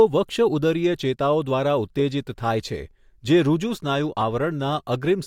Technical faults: none

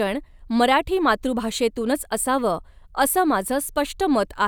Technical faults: none

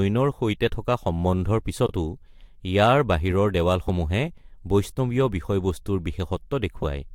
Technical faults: frames out of order

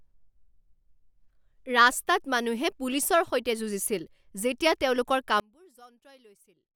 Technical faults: one channel inverted

